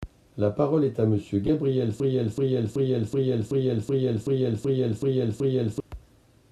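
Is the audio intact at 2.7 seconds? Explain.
No. From 2.00 to 5.80 s a broken-record loop is in progress: a 0.38 s fragment plays ten times back to back, likely because playback stalled and kept resending its last buffer. On a spectrogram or waveform, identical blocks tile evenly.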